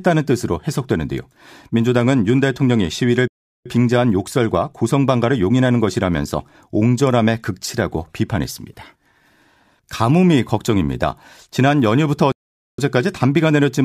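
It's a speech clip, and the speech cuts out twice, at 3.28 to 3.66 s and again at 12.32 to 12.79 s, with dead silence for about 0.38 s and 0.46 s. That's a playback stall, most likely the player starving for data or its thread getting blocked until it caught up.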